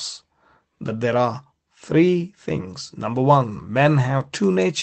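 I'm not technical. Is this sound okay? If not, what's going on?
Yes, nothing in this speech recording is going wrong. It has come through an ordinary internet call connection, so it has the dulled top end of call audio, with the highest sounds stopping at about 8 kHz.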